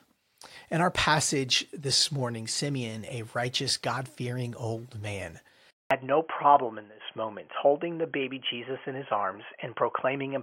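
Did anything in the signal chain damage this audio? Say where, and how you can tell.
Yes. At the device or driver stage, the input was likely switched to a poorer device at 5.71 s, right after "fearing old man". A gap of about 200 ms marks the switch. From there to the end, nothing passes above 3.3 kHz, so the speech turns dull and boxy. A new, faint background noise appears, roughly 50 dB below the signal, while the overall level stays about the same. The band limit fits a headset call profile.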